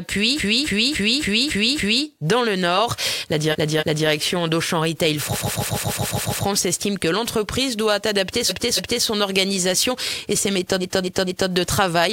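A stuttering loop repeats a fixed slice of sound in five places, the signature of repeated frames, where compressed frames are decoded more than once. From 0.35 to 2.02 s a 279 ms block plays six extra times. From 3.51 to 4.07 s it plays twice more. From 5.32 to 6.43 s a 139 ms block repeats eight extra times. From 8.48 to 9.03 s a 279 ms block repeats twice more. From 10.80 to 11.50 s a 232 ms block repeats three extra times. Together the repeats lengthen the audio by about 4.6 s.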